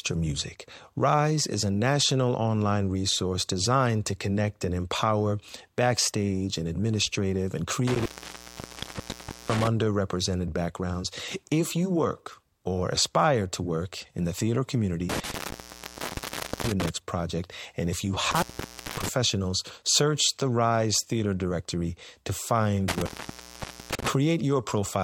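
Speech, broken up by an intermittent contact. The sound drops out four times: 7.87 to 9.67 s, 15.09 to 16.89 s, 18.31 to 19.08 s, and 22.88 to 24.08 s. Within each, the line is fully open for about 1.44 s, 1.30 s, 0.55 s and 0.85 s. Crackle marks the edges of each gap, and faint hiss remains while the circuit is broken. This points to a loose cable or plug.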